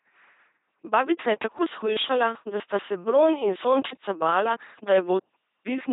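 An LPC-10 vocoder colours this speech clip from start to finish, giving it a buzzing, mechanical robot quality with nothing above 3.8 kHz. Each moment is rebuilt from a short all-pole filter fed by either a pulse train or noise, so the damage is heavy at the codec's 2.4 kbit/s.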